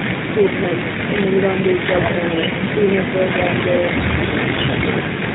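From start to finish the speech carries plainly audible G.729 codec damage, consistent with the 8 kbit/s G.729A variant. The codec rebuilds each 10 ms frame from a vocal tract filter, a pitch predictor and a few pulses, so the sound comes out slightly rough and synthetic. On a spectrogram nothing appears above 4 kHz, and harmonics look smeared and blocky frame to frame; the waveform shows simplified, pulse-like excitation.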